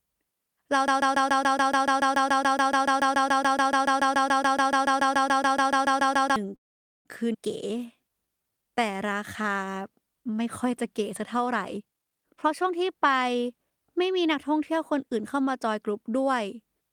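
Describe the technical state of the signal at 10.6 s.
At 10.6 s the speech signal is intact, with no audible fault at that moment.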